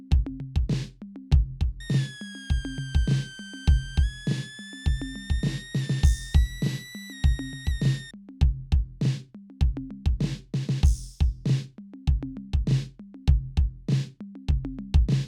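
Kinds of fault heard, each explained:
Switching supply whistle: from 1.80 to 8.11 s, a thin high whistle sits about 20 dB below the music, wandering between 1.55 and 1.97 kHz. A power supply's switching frequency has dropped into the audible range and leaks into the audio.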